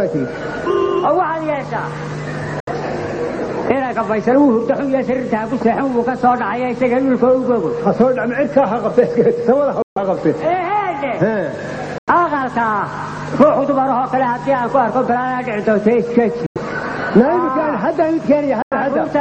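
Five short holes break the audio at 2.60, 9.82, 11.98, 16.46 and 18.62 s, lasting about 70, 140, 93, 93 and 93 ms, which fits a few lost packets each time. These are likely Bluetooth dropouts: packets missed the headphones and the output fell silent. What sets them apart from a buffer underrun or a skip is that the gaps have abrupt edges or a fade of a few milliseconds and the sound resumes further along, as if it had played on unheard, with nothing repeated or stuttered.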